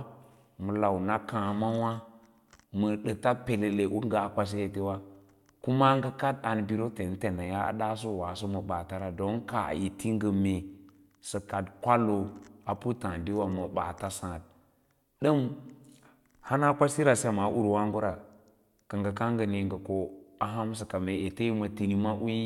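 No technical faults can be heard anywhere in the recording.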